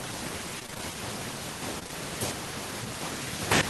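From 0.59 to 0.92 s the speech breaks up with repeated packet loss, heard as a choppy, robotic stretch. Six short gaps, the longest about 20 ms, were each patched by extending the preceding sound, so concealment covers roughly 44% of that third of a second. On a spectrogram the harmonics freeze into flat, smeared bands between the true segments. The waveform shows repeated cycles with abrupt joins.

Three back-to-back short concealed packet losses follow at 1.79 to 1.83 s, 1.83 to 1.87 s and 1.87 to 1.91 s. Each lost about 20 ms, filled with 17 to 21 ms of sound continued from the moment before and then blended back into the real signal. The result is a brief wobble or smear across about 0.12 s. A spectrogram shows locally stretched, blurred frames, and the waveform shows slightly uneven joins.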